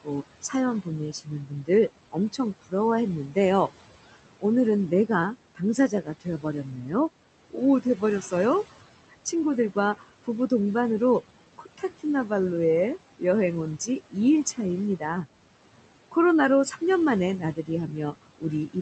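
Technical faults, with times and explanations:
Throughout: noise suppressor artifacts. The background, sitting about 16 dB under the speech, gets pushed down by roughly 17 dB, but the suppressor makes that call band by band and frame by frame. So the noise drops away in the gaps and creeps back up under the talking.
0.03 to 10.51 s and 11.58 to 18.8 s: speech cut by the noise suppressor. Here the suppressor mistakes bits of the actual speech for noise and turns them down with the background, by up to about 19 dB in the first stretch and about 18 dB in the second. In the first span it adds up to something like a second and a half of affected sound. Soft consonants and word endings come out swallowed or faint rather than fully missing.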